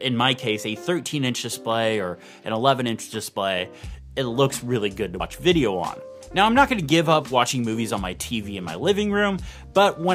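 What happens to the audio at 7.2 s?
Nothing goes wrong at 7.2 s; the audio carries on intact through that moment, with no dropout, click, glitch or other audible fault.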